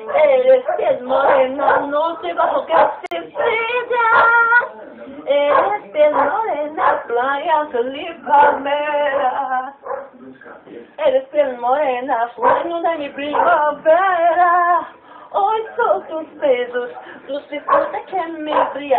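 At 3.06 s there's a gap at a join of encoded pieces: a 51 ms hole of silence with smeared edges, where two separately encoded chunks were butted together untrimmed, before the sound picks up where it left off. Then come three runs where speed and pitch shift together and snap back: 3.69 to 5.09 s about 6.4% fast and roughly a semitone sharp, 13.37 to 14.33 s 6.4% slow and a bit over a semitone flat, and 17.34 to 18.12 s sharp again. That's likely a drift correction step, with clock-matching software jumping the playback rate to rebalance its buffer.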